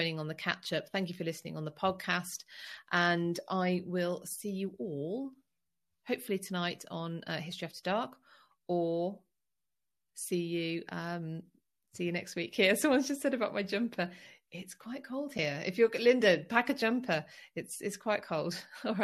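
At 15.38 s, one AAC frame was lost and the decoder muted it, so the overlapping windows fade the speech out and back in, leaving a brief, soft-edged gap. The gap of about 10 ms fits a single short frame of the low-delay AAC compression the sound likely passed through.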